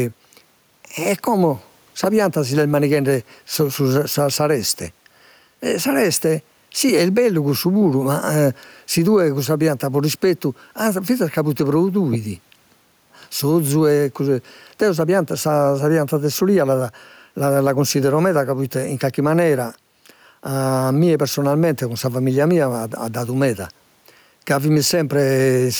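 Gain pumping runs through the whole speech clip. The room noise sits about 45 dB below the speech, and the gain swings by roughly 5 dB, leaving loud and soft parts closer in level and the sound squashed, likely from a fast limiter pulling down excessive microphone gain. Unlike a noise gate, the background never cuts to silence.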